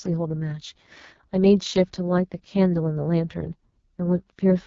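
Throughout, the speech has gone through the AMR wideband (HD Voice) codec at what sounds like its lowest 6.6 kbit/s rate, leaving it rough and raspy, with nothing above 7.3 kHz.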